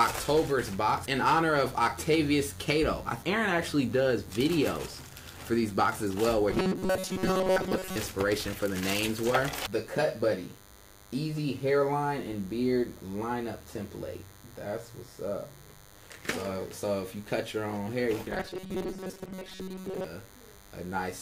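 Throughout the clip runs a DECT cordless phone buzz. A nearby handset or base station sends radio bursts 100 times a second, and the audio circuitry rectifies them. The result is a thin, harsh buzz about 25 dB below the sound, rich in harmonics rather than the smooth, rounded tone of mains hum.

From 6.50 to 7.96 s, and again from 18.31 to 20.04 s, the sound turns robotic, from repeated short buffers. Delayed audio was likely filled by looping the last 5.3 ms or so, covering most of the material. This stamps a rigid 188 Hz metallic pitch that loosely tracks the sound, unlike dropouts, which leave silence.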